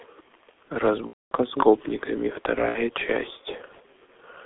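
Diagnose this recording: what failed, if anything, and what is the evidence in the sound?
Codec stage: throughout, the speech is confined to 300 Hz to 3.5 kHz and sounds hoarse with smeared consonants. This fits G.723.1 coding near 6 kbit/s rather than plain filtering.

Network stage: VoIP packet loss concealed by the speech codec at 1.07–1.32 s and 2.69–2.81 s. Speech smears into a fading buzzy tone or coloured noise, and in the longer first gap it goes silent from the third lost frame onward.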